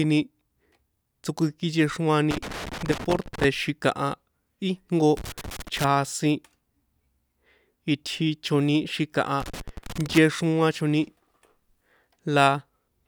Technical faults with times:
2.31-3.44 loose connector crackle
5.17-5.84 loose connector crackle
9.40-10.18 loose connector crackle

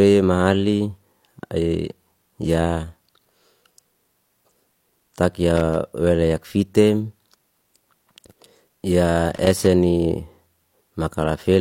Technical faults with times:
5.57-5.76 loose connector crackle
9.35-9.66 loose connector crackle

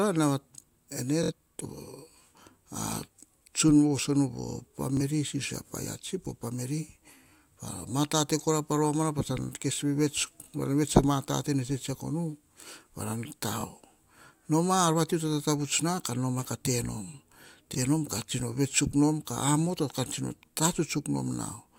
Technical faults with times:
1.23-1.32 Bluetooth stutter
4.97-5.01 Bluetooth stutter
13.61-13.65 Bluetooth stutter
17.74-17.78 Bluetooth stutter

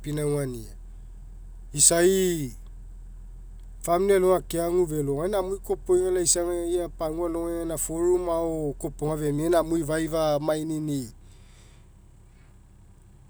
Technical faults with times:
none

